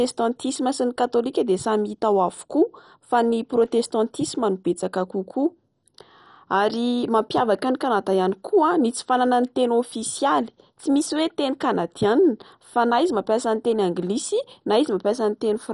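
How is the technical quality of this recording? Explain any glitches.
The recording is clearly degraded by plainly audible lossy coding across the whole clip. What is heard throughout is a dull, band-limited sound with nothing above 11.3 kHz, plus a gurgling, granular roughness as upper sub-bands flicker in and out and the rest are coarsely quantised. This is likely MP2 compression at a low rate near 48 kbps. The flickering bands and granularity set it apart from a simple low-pass filter, which would only dull the sound.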